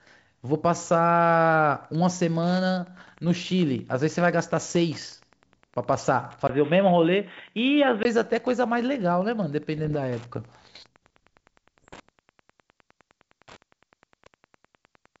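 From 1.28 s to the end, Wi-Fi interference is present: a nearby radio's signal is rectified by the audio circuit, giving a steady tick every 102.4 ms, nearly ten per second, about 35 dB below the speech. On a spectrogram it shows as a comb of thin vertical lines at that exact spacing. In the waveform it appears as small regular spikes riding on the signal, clearest in the pauses.

Bit errors on an ADPCM link strike at 2.97 to 3.18 s, 4.63 to 4.76 s, 9.78 to 9.97 s and 11.79 to 12.06 s. A fraction of a percent of the bits are flipped, and each bad bit knocks the decoder's step size and predictor off track. The error therefore rings on as pops and rough, gritty bursts with brief jumps in level. Each burst appears as a broadband smear on the spectrogram and as jagged, uneven excursions in the waveform.

From 6.47 to 8.05 s the sound turns dull and boxy, bracketed by 20 ms gaps of silence. 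Nothing remains above 3.8 kHz, and a new noise floor about 50 dB down appears, while the loudness stays much the same. The likely cause is the input switching to a poorer device and then back. On a spectrogram the upper band is cut off flat at 3.8 kHz for that stretch, with narrow blank slots at each switch. On either side, the G.722 wideband path carries content up to 7 kHz.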